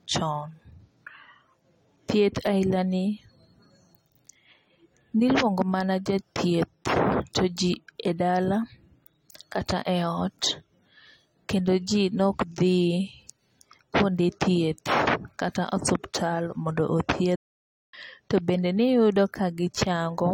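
At 17.35 s the speech cuts out dead for about 0.58 s, picking up again at 17.94 s. That's a playback stall: the player most likely starved of data or had its thread held up, so output simply went silent until it caught up.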